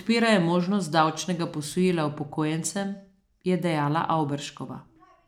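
No technical faults can be heard anywhere in the recording. There is nothing here to place on a timeline or trace to a cause.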